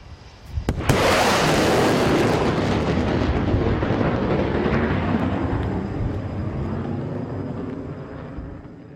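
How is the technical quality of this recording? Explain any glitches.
The technical quality of the recording is sound, with no glitches to explain.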